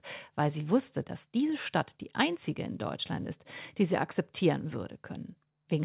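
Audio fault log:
No audio fault to log.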